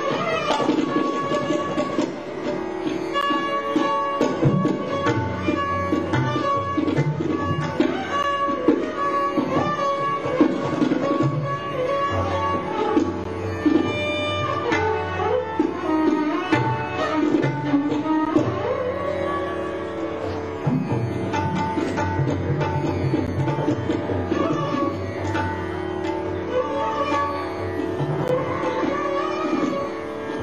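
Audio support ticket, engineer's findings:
Gap between chunks at 3.21, 8.23, 13.24, 18.25, 23.27 and 28.28 s. Hard-edged holes of about 13 ms, repeating every 5 s. Probable component: chunk handoff in the stream or player. Silence is inserted at each join; no audio is lost, only interrupted.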